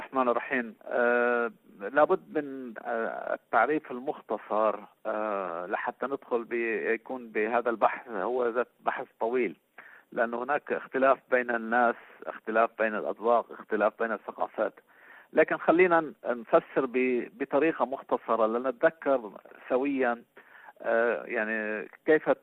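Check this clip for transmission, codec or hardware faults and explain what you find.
No faults detected here.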